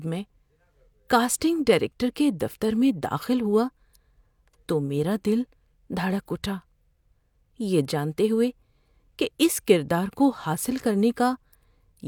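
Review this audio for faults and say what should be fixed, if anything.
Nothing here needs fixing: I didn't hear any technical faults in this speech recording.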